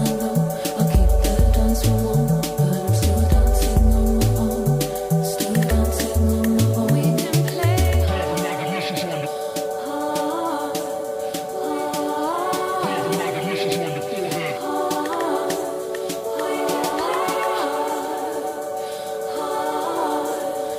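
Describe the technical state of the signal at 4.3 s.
At 4.3 s the signal is intact, with no audible fault at that point.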